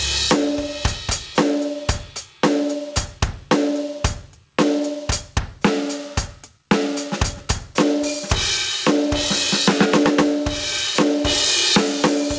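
Gain pumping runs through the whole music clip. The input gain was likely set far too high, so a fast limiter or compressor clamps down each time a loud passage arrives and lets go as soon as it passes. The level swings by around 20 dB. Loud and soft passages sit squashed together, and the band-limited call path, with nothing above 8 kHz, fits a G.722 stream at 64 kbps.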